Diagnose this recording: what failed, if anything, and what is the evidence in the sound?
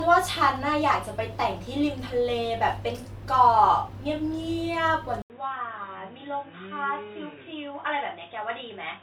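At the driver and device-selection stage, the input likely switched to a poorer device at 5.22 s. After an 80 ms silence, the speech loses everything above 3.8 kHz, turns dull and boxy, drops a few decibels, and gains new background noise about 35 dB down.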